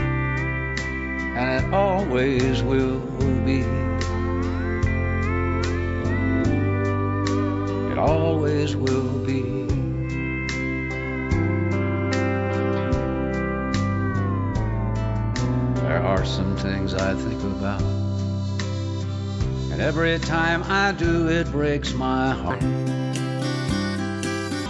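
From 22.50 to 24.66 s the audio turns high and hurried, running 1.5 times fast and about 7 semitones sharp, a wrong sample rate fault consistent with 16 kHz material played back at 24 kHz without conversion.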